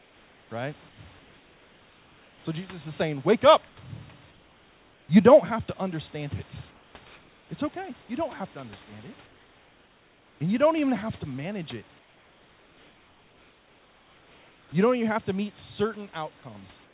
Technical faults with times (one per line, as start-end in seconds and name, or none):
0.00-0.50 comfort noise in place of the background
0.89-2.45 comfort noise in place of the background
3.68-3.77 comfort noise in place of the background
4.31-5.09 comfort noise in place of the background
6.71-7.49 comfort noise in place of the background
9.26-10.40 comfort noise in place of the background
11.99-14.72 comfort noise in place of the background
16.85-16.94 comfort noise in place of the background